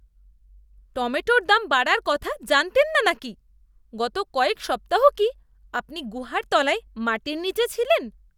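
A short recording of speech, with no technical fault to be heard anywhere in it. Nothing in the audio calls for a time, a value or a cause to be pointed out.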